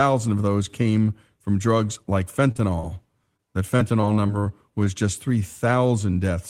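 A speech recording with network delivery faults. Right after "came from drugs like", a short stall from a late packet at 2.51–2.57 s drained the jitter buffer, so the receiver held the last sound about 36 ms longer before resuming with nothing lost. Short concealed packet loss follows at 2.57–2.60 s, 2.80–2.85 s and 3.37–3.40 s, where about 20 ms went missing each time and was patched by extending the preceding sound, leaving brief smears or wobbles. From 3.76 to 4.45 s, repeated packet loss produces robotic sound: four holes, the longest 24 ms and about 60 ms lost in total, are each filled from the preceding audio, making that stretch choppy.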